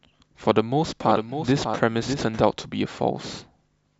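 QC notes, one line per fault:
1.01–2.41 s, doubled audio track. A second full-band copy of the speech trails the original by roughly 0.7 s, about 5 dB quieter. It has no decay or room colour and starts and stops abruptly. Likely a slower second capture path mixed back in.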